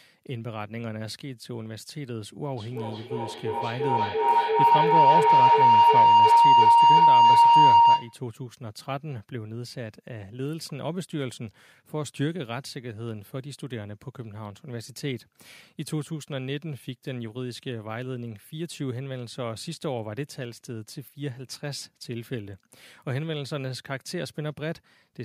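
From 2.56 to 8.26 s a feedback howl builds around 1 kHz, pulsing roughly every third of a second and peaking about 15 dB above the speech, with mic and speaker looping.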